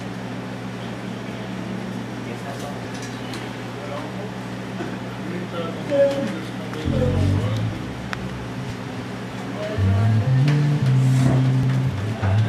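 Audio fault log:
2.85–11.63 s, clock drift buffer slips: a short click or pop recurs at a steady interval of 2.93 s, about four times across this span. This regular spacing likely comes from two devices running on separate clocks that disagree by roughly a thousand parts per million. The buffer between them slowly fills or drains until a small block of samples, on the order of 150, is dropped or repeated, leaving a tiny discontinuity in the waveform.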